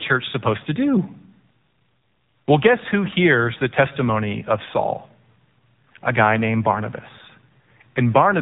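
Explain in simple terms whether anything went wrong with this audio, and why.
From start to finish the speech sounds muffled, boxed-in and buzzy, almost synthetic, with nothing above 3.8 kHz. That comes from the AMR narrowband mobile codec, the phone-call speech coder. It rebuilds the voice from a simple vocal-tract model, and here it is squeezed hard enough to hear plainly.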